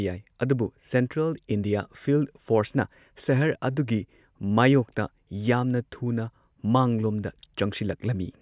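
Speech recording with no audible technical faults from the first sample to the last.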